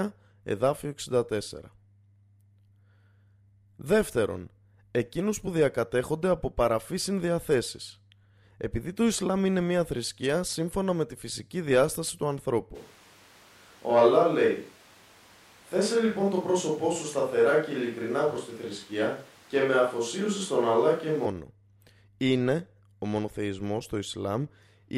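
Speech, and from 12.77 s to 21.25 s it sounds like a switch to a distant microphone, likely the close mic dropping out. The voice goes roomy and hollow with thinner bass, loudness stays about the same, background noise sits roughly 30 dB under the speech, and both changeovers are abrupt.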